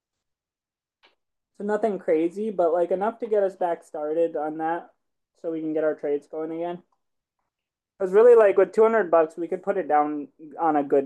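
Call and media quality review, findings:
Nothing stood out on listening to this speech clip, so there are no findings to log.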